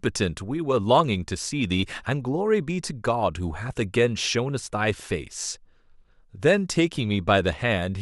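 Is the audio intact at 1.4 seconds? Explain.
Yes, the audio is intact at 1.4 seconds, with no dropout, click, distortion or other fault to be heard at that moment.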